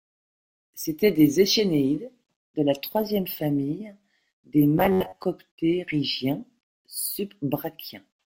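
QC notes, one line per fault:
4.78–5.24 s, robotic sound from repeated short buffers: after "la troisième famille des", a metallic 93.8 Hz buzz, from roughly half the audio being replaced by a repeated segment, likely an 11 ms buffer; the spectrogram shows even harmonic stripes.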